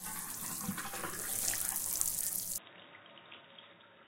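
At 2.58 s the sound abruptly turns dull and boxy, with nothing above 3.8 kHz, a drop of around 10 dB, and a faint new noise floor well below the signal, with no gap. This likely marks the input switched to a poorer device.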